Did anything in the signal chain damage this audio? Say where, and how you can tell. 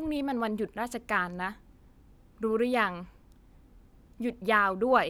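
No, nothing along the chain left a mark on this speech recording, so there's no damaged stage to point to here.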